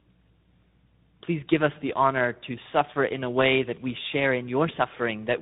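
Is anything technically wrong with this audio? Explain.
Yes, the speech carries tandem speech coding from start to finish. The sound points to two speech codecs in a row, something like a low-rate AMR-NB leg followed by a G.726 ADPCM stage, with a G.711 hop between them. Each coder works on what the previous one already mangled, so the errors stack up. You hear a rough, muffled, warbly voice, and there's nothing above 3.8 kHz.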